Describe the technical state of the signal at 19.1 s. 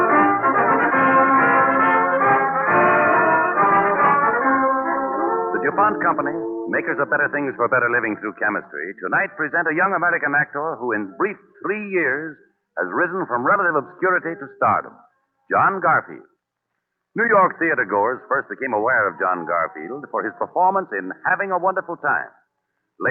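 At 19.1 s the signal is intact, with no fault audible at that moment, the sound passing through the call path's codec and jitter buffer as they normally work.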